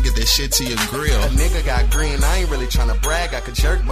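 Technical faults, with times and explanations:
No technical faults can be heard anywhere in the clip. Nothing in it calls for a time or an explanation.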